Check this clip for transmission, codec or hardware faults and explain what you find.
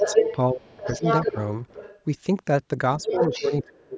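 Two faults recur through this speech clip, both pointing to an echo canceller struggling with loudspeaker pickup.

Other side's voice leaking through, at 0–0.36 s, 0.67–1.4 s, 1.68–2.01 s and 3.01–3.64 s: likely residual loudspeaker echo the canceller failed to remove. A second voice intrudes, first about as loud as the talker, later around 5 dB and 20 dB below.

Speech suppressed in double talk, at 0.13–0.36 s, 0.54–1.04 s, 1.26–1.36 s and 3.03 s to the end: with both sides talking, the canceller likely ducked everything. The talker's voice sinks by roughly 10 dB, and in the longer stretches by roughly 25 dB.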